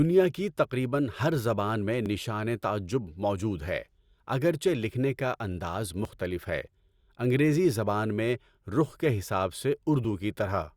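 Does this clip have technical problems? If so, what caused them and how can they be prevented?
Yes. Audio missing between chunks causes tiny skips at 2.06 s (before "تعجب موجود ہے اگرچہ"), 6.05 s (after "اگرچہ لکھنے کا انداز") and 10.04 s (after "رخ کے حساب سے"), about 4 s apart. Each loses only a few milliseconds, and the two sides join with no silence between them, which sets this apart from a dropout. The likely cause is a recorder losing a sliver while switching between 4 s blocks. Gapless or overlapping buffering at block boundaries prevents it.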